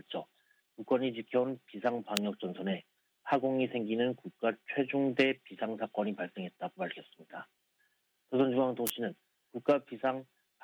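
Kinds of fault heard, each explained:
Electrical switching spike: Two sharp snaps sit on top of the sound, a single one at 2.17 s and a tight burst from 8.87 to 8.90 s, both fairly loud. They're likely arcs from a nearby switch or motor getting picked up by the audio line.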